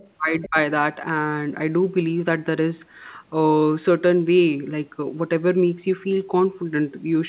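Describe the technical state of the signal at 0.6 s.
Right around 0.6 s the speech is coming back from a brief suppression that runs from 0.48 to 0.56 s. It dips sharply, by roughly 20 dB. This is likely speech suppressed in double talk. The echo canceller mistook overlapping talk for loudspeaker echo and turned the voice down.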